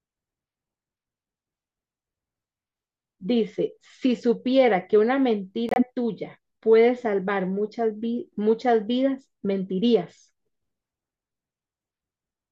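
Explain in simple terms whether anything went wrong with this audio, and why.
Corrupt frame muted, from 5.69 to 5.83 s: the speech drops abruptly into a short silent hole about 0.14 s long. The audio was stored as a series of small compressed chunks, and some of those chunks had bits scrambled. The decoder couldn't make sense of them, so the player filled their place with silence. The gap's length fits a handful of chunks lost in a row. The speech resumes on time afterward, since the timing was kept.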